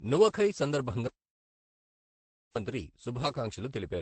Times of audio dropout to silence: 1.07-2.56

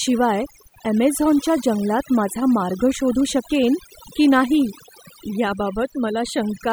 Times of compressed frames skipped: none

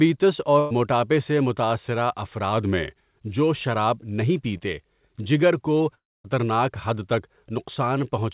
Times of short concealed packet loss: 4.57-4.63

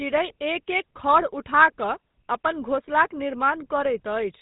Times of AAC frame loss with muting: none

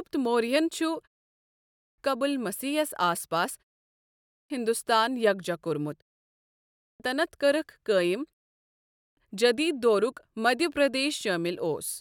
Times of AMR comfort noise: none

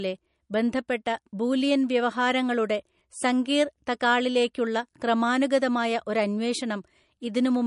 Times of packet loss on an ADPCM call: none

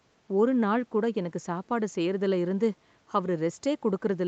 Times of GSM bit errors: none

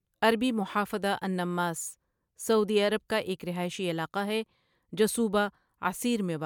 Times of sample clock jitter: none

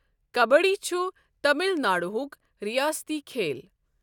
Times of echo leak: none

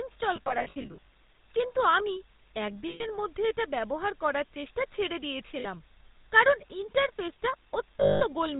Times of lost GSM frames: 0.36-1.09, 2.88-3.06, 5.60-5.65, 8.00-8.24

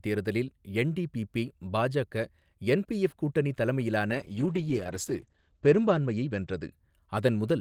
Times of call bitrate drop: 4.12-6.98

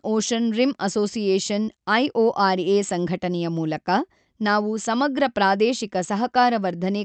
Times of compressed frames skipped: none

